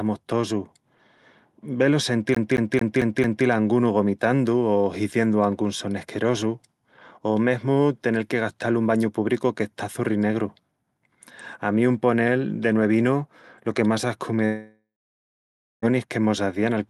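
Right after "vel o", from 2.35 to 3.46 s, the speech gets caught in a CD stuck on one turn: the same 0.22 s snippet plays five times over, with a tiny mute at each jump back, so you get that quick, even stutter before it moves on to "a angunu".

Later, after "lo que más ascu", from 14.45 to 15.85 s, what you hear is most likely a long network dropout. The last bit of sound smears into a fading buzz or hiss, then there's about 0.94 s of dead silence, and the talk resumes at "que mos hazían al" with roughly 1.4 s of speech simply gone.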